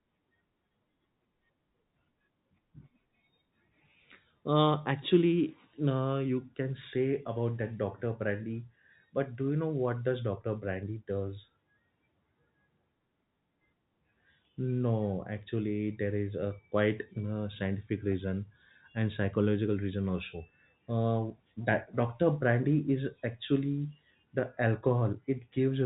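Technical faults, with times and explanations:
No technical faults can be heard in this speech recording, which carries the narrow band of ordinary telephone coding that stops at 4 kHz, with at most a faint level-following hiss from its coarse sample steps.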